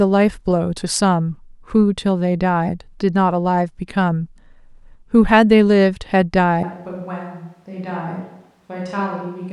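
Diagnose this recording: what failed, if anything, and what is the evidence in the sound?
At capture, the close microphone likely dropped out, leaving a switch to a distant microphone. From 6.63 s to the end the speech turns abruptly roomy and hollow, loses bass, falls about 10 dB, and room noise sits roughly 35 dB below it.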